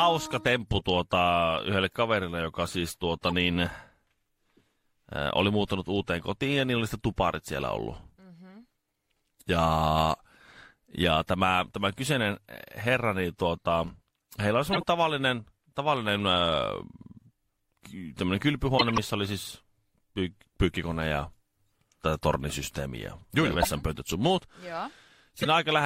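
Corrupt frames were decoded at 3.27, 14.73, 18.78, 23.61 and 25.31 s. Damaged compressed frames played anyway, misplacing energy. Each sounds like a brief chirp or noise burst. The loudest is at 18.78 s, before "oli siis py pyykkikone".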